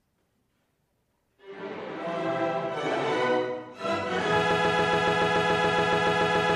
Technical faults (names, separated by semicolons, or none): broken-record loop